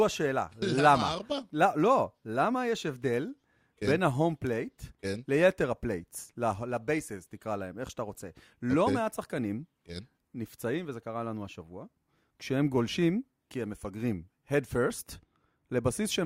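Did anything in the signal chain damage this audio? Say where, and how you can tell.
Yes. At 4.47 s the speech carries a single sharp tick. It is a bit error spike, confined to one sample. The click is broadband and bears no relation to the surrounding sound. That points to the digital side, in memory or on a digital link, not analogue wiring. One flipped bit throws the sample value off by a power of two. The next sample returns to normal, so only a brief tick is heard.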